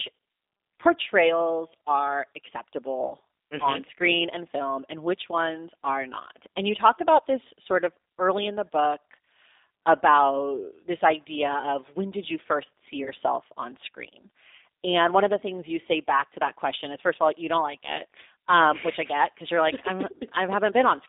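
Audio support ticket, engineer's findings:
G.729 codec, throughout. Speech confined to a 300 Hz to 3.7 kHz line band, nothing above 4 kHz. Rough, slightly synthetic timbre, plainly audible. Component: 8 kbit/s G.729A path rebuilding speech from a vocal tract filter, pitch predictor and sparse pulses per 10 ms frame.

VoIP packet loss concealed by the speech codec, 3.07 to 3.13 s. About 30 ms gap, which fits three 10 ms frames. Decoder stretches the last pitch and filter into a fading fill; speech stays weak briefly after packets resume.

VoIP packet loss concealed by the speech codec, 13.04 to 13.10 s, between "did you first see" and "on screen". About 20 ms gap, consistent with two lost frames. Same extrapolated, decaying fill, with short weak recovery.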